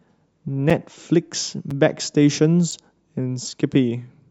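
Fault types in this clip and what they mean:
Gap between chunks: at 0.70, 1.71, 2.71 and 3.72 s, the speech stops for 6.5 ms where one-second pieces of audio meet. No sound is lost, but each join leaves a short hole, repeating once per second.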